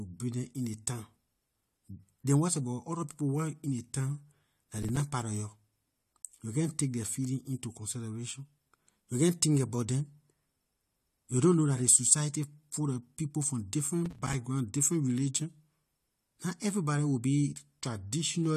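Processor overload crackle occurs at 4.78 to 5.00 s, after "town dah", and again at 14.06 to 14.34 s. Missed buffers of roughly 5 ms fall silent. The gaps sound like gritty crackle.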